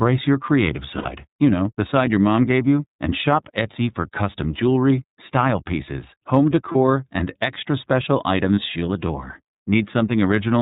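From the start, the whole speech clip runs through the iLBC codec, and you can plainly hear it. It's narrowband, so nothing above 4 kHz survives, which leaves it boxed-in and a bit rough and synthetic. Each frame's excitation gets coded on its own, and the grain of it fits the 30 ms, 13.33 kbps mode.

Then there are three spots of lost iLBC frames. The first comes right after "your creative", from 0.98 to 1.06 s. It sounds like about 60 ms, or two frames, gone. The decoder fills the hole by repeating the last pitch cycle with some noise mixed in, so you get a brief held, buzzy vowel. Next, around 6.72 to 6.76 s, between "jewelry style pieces home" and "and extra special", a single 30 ms frame drops and gets the same buzzy patch. The last one lands at 8.55 to 8.59 s, between "and extra special" and "she'll adore", again one frame. Because iLBC frames stand alone, the voice snaps back right away each time.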